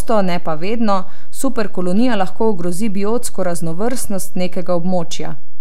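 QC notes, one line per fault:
throughout: DC offset, the speech waveform sits shifted off zero by about -10 dBFS, inaudible itself but eating headroom, with a steady band at 0 Hz on the spectrogram.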